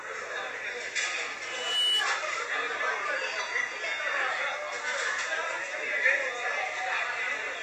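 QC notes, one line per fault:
Throughout: Vorbis compression, likely the cause of a grainy, hissy treble and roughened tones. Nothing is present above 14.2 kHz, so the codec has lowered its cut-off, and the detail below that limit is quantised so coarsely that it turns into noise-like texture of similar energy. Attacks in the everyday sound are smeared. The damage is plainly audible and fits a low bitrate of around 33 kbps.
1.44–2.06 s: loudspeaker feedback squeal. A single 3 kHz tone appears and swells over a little under half a second into a squeal that sits roughly 5 dB above the surrounding sound. The microphone is picking up its own loudspeaker, and at 3 kHz the loop gain exceeds one, so that frequency feeds on itself and grows.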